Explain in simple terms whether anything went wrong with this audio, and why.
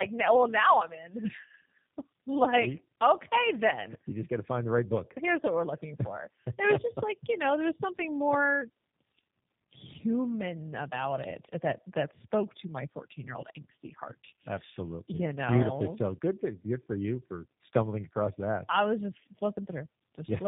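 Yes, something went wrong, and it lasts the whole clip. The speech sounds rough, muffled and warbly, and there's nothing above about 3.7 kHz. That points to tandem speech coding. The call seems to have crossed two networks that each squeeze speech with their own low-rate speech codec, so it was decoded and squeezed again at the handover. The second coder had to work from the first one's already damaged output, so the flaws stacked up.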